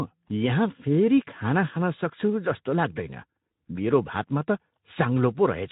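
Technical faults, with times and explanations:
No technical faults can be heard in this speech clip. The audio passes through the Speex codec at about 15 kbps, which leaves only a light trace of coding texture on the speech.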